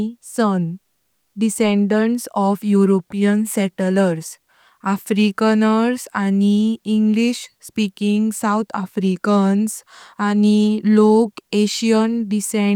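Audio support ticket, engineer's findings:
Listened through the whole speech recording and found nothing to log against it, so no findings on this ticket.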